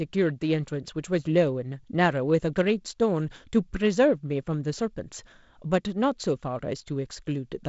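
Nothing here counts as a technical fault; the speech arrives over a G.722 wideband telephone link at 48 kbit/s, with content reaching up to about 7.7 kHz and only the light coding texture that comes with that rate.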